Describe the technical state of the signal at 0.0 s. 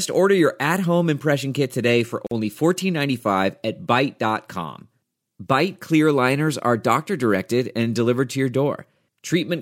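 At 0.0 s the audio is intact, with no technical fault present at that moment.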